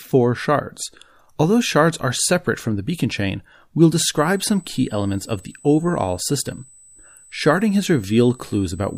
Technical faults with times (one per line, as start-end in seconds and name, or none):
4.17-8.98 USB whine